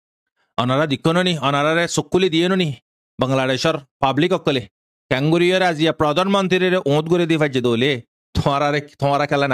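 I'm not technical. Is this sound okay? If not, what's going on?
Yes, this sound is okay. Nothing in it jumps out as a technical problem.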